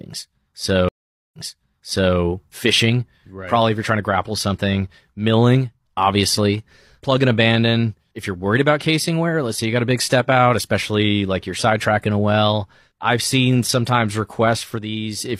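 At 0.89 s a stream reconnect cuts the speech for 445 ms; a fresh decoder restarts with a brief fade-in, resuming about 0.84 s earlier, so material repeats. On a spectrogram, a blank gap, then repeated patterns. At 2.74 s, chunks out of order: a 20 ms chunk arrives two chunks late, causing a jumbled moment, visible as three sharp vertical discontinuities in the waveform.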